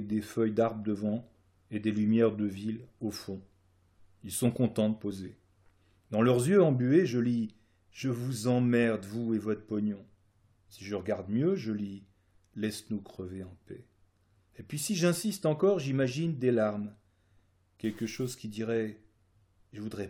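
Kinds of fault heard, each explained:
Stuck bit: from 17.84 to 18.34 s the sound turns grainy over a gritty floor around -50 dBFS, likely one data bit held fixed. Unlike clipping, the grit follows zero crossings of quiet passages, not just loud peaks.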